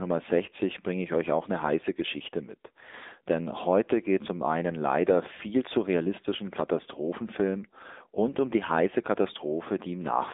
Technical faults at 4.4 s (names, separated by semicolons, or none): AMR narrowband mobile codec